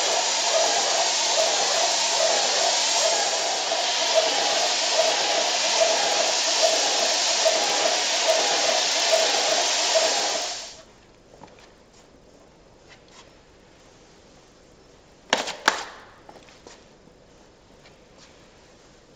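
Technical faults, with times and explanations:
Throughout: resampler restarted on every block. The audio was converted in separate 20 ms pieces, apparently from 16 kHz to 48 kHz. Each piece's edges lacked their true neighbouring samples, leaving a small error at every boundary. These repeat at 50 Hz, producing a buzz that follows the signal.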